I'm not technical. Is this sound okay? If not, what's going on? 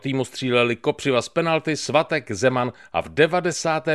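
Yes, this sound is okay; there's nothing wrong with it to worry about.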